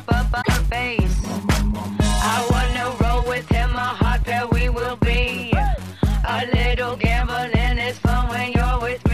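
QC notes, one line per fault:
0.41–0.49 s, broken MP3 bit reservoir: the audio jumps and about three frames of roughly 26.1 ms each come out garbled. This is likely from cut frames, where later frames look back into the reservoir and decode bytes belonging to another frame.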